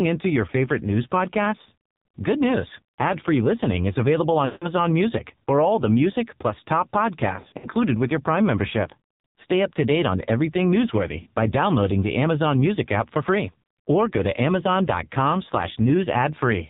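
From the start, this speech is squeezed through the AMR narrowband mobile codec at a low rate. Nothing above 4 kHz survives, and the vocal-tract model has so few bits that the voice comes out buzzy and synthetic. The heavy damage fits the low 5.9 kbps mode.

On top of that there are lost AMR speech frames, where the decoder stretches the last good frame and fades it. Right after "listening is available", 4.46 to 4.67 s, about 160 ms smears out and sinks toward silence. Between "the music plus top" and "with your", 7.36 to 7.69 s, shorter dropouts of up to 60 ms scatter over 280 ms, giving a warbly stutter. Between "to date on everything" and "by downloading the", 11.22 to 11.27 s, a 40 ms gap makes a quick dip.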